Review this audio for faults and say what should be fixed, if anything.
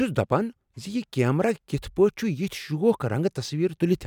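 No faults detected in this speech recording, so nothing needs fixing.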